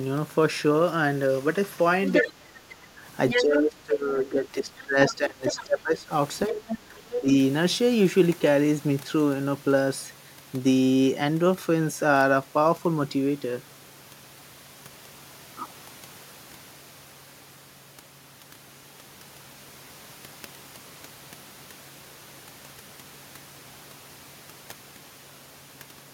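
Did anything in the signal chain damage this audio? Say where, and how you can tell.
Yes. Other side's voice leaking through, at call-processing stage: a second talker surfaces at 2.13–2.28, 3.29–3.43, 5.07–5.64 and 6.58–7.16 s, from about 10 dB below the main speech up to equal level. Unlike wiring crosstalk, it's intermittent, likely residual loudspeaker echo the canceller missed.

Speech suppressed in double talk, also in call processing: between 2.22 and 7.31 s the main voice dips by up to about 20 dB, roughly three seconds in all. Unlike network dropouts, it's likely the canceller ducking both sides at once.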